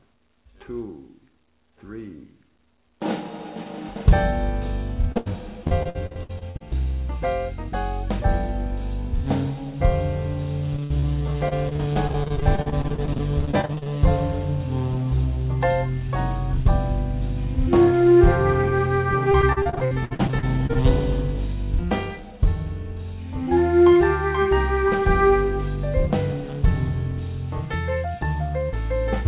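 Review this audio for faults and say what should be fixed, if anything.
A short concealed packet loss at 5.12 to 5.18 s covers a hole of about 40 ms. The receiver bridged it with 35 ms of synthetic continuation, built from the last pitch or as shaped noise, then blended back. On a spectrogram the harmonics or noise band look smeared and steady for that instant. A jitter buffer with a little more depth or forward error correction would prevent it.

A burst of packet loss follows directly at 5.18 to 5.28 s. About 80 ms of audio is gone, replaced by 81 ms of the last sound stretched out and fading, either a held buzz or a decaying hiss. The waveform shows a tapering repetitive envelope, and the spectrogram shows frozen stripes dimming before the audio jumps forward. Redundant packets, such as FEC or RED, would cover a burst of this length.

Repeated packet loss, the robotic sound, appears in four stretches:

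5.64 to 6.62 s, 10 gaps, 35% concealed
10.76 to 11.05 s, 4 gaps, 43% concealed
11.49 to 13.88 s, 28 gaps, 27% concealed
19.32 to 20.77 s, 15 gaps, 31% concealed

No single gap is longer than about 61 ms. The spectrogram looks chopped, with frequent short frozen patches interleaved with real content, and the waveform shows choppy, uneven segments. Fixing the network path's loss or jitter is what removes this.

The band ends at 4 kHz throughout, consistent with the G.711 A-law call path at 64 kbps. That limit is inherent to the codec.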